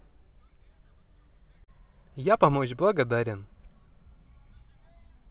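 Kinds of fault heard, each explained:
Short concealed packet loss: a brief smear around 1.64 s, where about 40 ms of the call arrived too late and the receiver filled the gap by extending the preceding sound.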